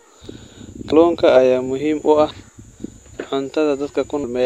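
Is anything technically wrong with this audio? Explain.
Yes. Compressed frames skipped at 0.92 s and 2.30 s: the decoder drops roughly 150 ms of speech each time, about five 26.1 ms frames, leaving a brief smeared blip at the jump.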